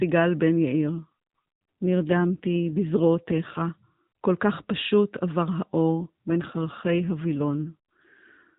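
From 0.84 to 3.62 s and again from 5.92 to 8.55 s there's an AMR rate drop: the speech turns buzzier and more synthetic with no gap. That fits the codec falling from 12.2 to 5.9 kbps.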